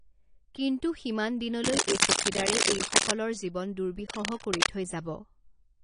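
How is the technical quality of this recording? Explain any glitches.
The quality is poor. Coding damage runs through the whole clip, and two scratchy bursts cut across the speech.

AAC compression: Nothing is present above 10.1 kHz. The speech sounds dull and smeared, with fizzy sibilants. This fits likely AAC-LC coding at a low bitrate near 32 kbps.

Cable scratch noise: From 1.64 to 3.11 s, just after "কিন্তু সিমান", rough scratching sits somewhat above the speech. From 4.06 to 4.68 s it returns at about the speech's level. A worn cable or connector being moved is the likely cause.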